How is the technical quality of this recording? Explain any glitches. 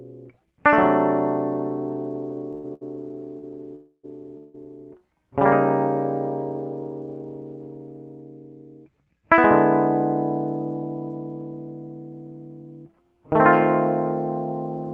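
The music is disrupted by a run of stutter followed by two short freezes, all within about two seconds, and throughout, the audio is on a low-bitrate call codec path. The high end stops near 12 kHz, which fits an Opus stream at around 20 kbps.

From 2.51 to 3.45 s there are repeated stalls (stutter): four brief gaps where packets arrived late and the jitter buffer ran dry. Each gap is bridged by stretching the last sound, so the music drags and hiccups. The longest gap is 94 ms, and about 217 ms in total, roughly a quarter of that span, is concealed. On a spectrogram these show as short smeared, repeated patches. The waveform shows slightly flattened stretches rather than clean cuts.

There are two call audio freezes, at 3.75 to 4.05 s and at 4.37 to 4.56 s. At each, the music halts and a fading continuation of the last sound fills the wait, 284 ms and 163 ms respectively. The first fades to about 60 ms of silence before playback resumes. 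The likely cause is packets held up in transit emptying the buffer. Nothing is lost; the music restarts where it stopped, but later. A spectrogram shows horizontal streaks of frozen harmonics decaying out. The first freeze also shows a brief blank band before the texture returns. In the waveform, a decaying envelope then an abrupt restart marks each freeze.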